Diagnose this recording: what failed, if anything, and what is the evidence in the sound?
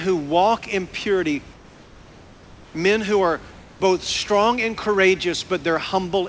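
Between 1.54 and 2.74 s, the room background, which sits about 27 dB under the loud parts, is swapped for a flat, featureless hiss about 3 dB quieter, and the real room texture returns right after. That 1.2 s patch is most likely comfort noise in place of the background, coming from the call processing. Discontinuous transmission stops sending during the pause and the receiver plays synthetic noise roughly matched to the room. The band stops at 8 kHz, as you'd expect from the G.722 path.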